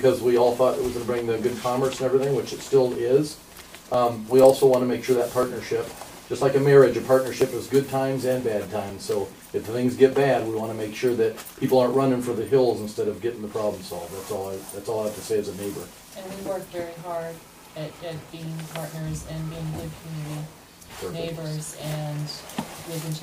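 From 2.95 s to 10.39 s there are periodic USB or driver dropouts: a tick every 0.5 s or so, about fifteen in all, where a few milliseconds of audio simply get skipped because something keeps stalling the USB bus or audio driver on a fixed schedule.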